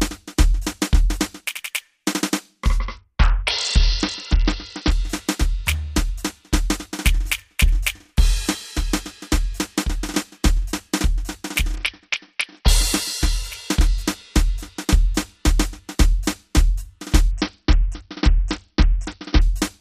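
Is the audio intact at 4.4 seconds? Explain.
No. At 4.4 seconds the music is inside a Bluetooth SBC bit pool drop running from 2.80 to 4.91 s. The link appears to have been congested, and the encoder cut its bit budget sharply. The sound fits a bit pool falling from 31 to about 7, near 61 kbps. The highest sub-bands get almost no bits and the rest are coarsely quantised, so the treble goes dull and a gritty noise rides on the music until the rate recovers.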